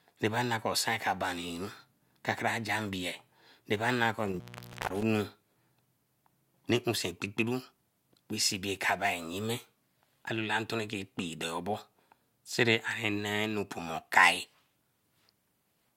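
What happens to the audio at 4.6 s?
At 4.6 s the speech is inside an intermittent contact fault running from 4.27 to 5.03 s, just after "na kor". A loose cable or plug breaks the signal path, so the sound cuts out for about 505 ms, with crackle where the contact opens and closes and faint hiss left in the gap. The crackling edges and residual hiss set it apart from a clean digital dropout, which falls to silence without that scratchy transition.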